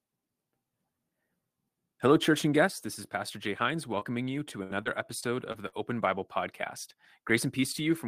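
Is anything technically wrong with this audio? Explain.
Yes, there are several faults in this speech clip.

At 2.67 s the whole signal, voice and background together, drops by about 4 dB in a single step. The likely cause is the call software turning down the microphone's input volume. Because the drop is instant and stays put, it reads as a microphone volume step-down rather than a packet problem.

Between 3.99 and 4.04 s there is a short concealed packet loss: about 20 ms of audio never arrived, and the decoder bridged it by extending the preceding sound before fading back in. It comes across as a brief smear or wobble, one isolated event instead of a run.

Inside that same moment, from 4.01 to 4.03 s, a lost packet was rebuilt from error correction. Roughly 20 ms was played from the low-bitrate backup copy carried in the next packet, so nothing goes silent, but that sliver sounds rougher and noisier than its surroundings.

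From 4.63 to 5.75 s there is repeated packet loss with a robotic sound. Five gaps, the longest about 63 ms, were each patched by continuing the last sound, covering about 15% of the span, with some frames rebuilt from error-correction copies. The quick succession of patches gives a choppy quality that a single dropout lacks.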